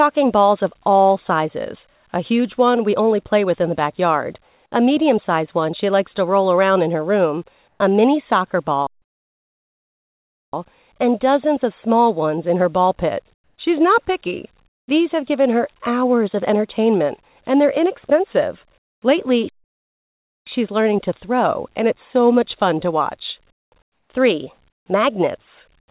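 At 7.68 to 7.8 s the background briefly turns into a flat, featureless hiss about 5 dB louder than before. This is comfort noise in place of the background, likely from discontinuous transmission filling a pause with synthetic noise.

After "room a mini soccer", the sound cuts out completely from 8.87 to 10.53 s, a 1.66 s silence, then resumes at "and dozens of small". This is a playback stall, likely the player running short of data.

The same smooth substitute noise returns at 13.34 to 13.58 s and 14.68 to 14.88 s, each time about 9 to 10 dB quieter than the real background. It appears again after "entertainment and they're inexpensive" at 18.78 to 19.02 s, there about 23 dB quieter.

A second stall, 0.98 s of silence, follows at 19.49 to 20.47 s.

Comfort noise returns at 23.52 to 23.72 s, then after "much fun to watch" at 23.82 to 24.1 s, again at 24.7 to 24.86 s and at 25.8 to 25.88 s. 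These stretches sit about 12 to 18 dB below the background they replace. Throughout, nothing is heard above 4 kHz, consistent with a narrowband call codec.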